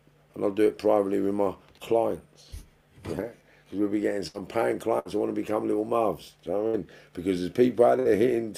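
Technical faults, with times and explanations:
4.27–4.41 s, 4.99–5.08 s, 6.67–6.76 s and 7.99–8.08 s, burst of packet loss: four short dropouts where a run of audio never arrived in time. Each time, the receiver stretches the last sound it had for roughly 55 to 65 ms, letting it fade, and then jumps ahead, so about 60 ms of the original is skipped. That's why each spot sounds like a brief smeared hold followed by a jump.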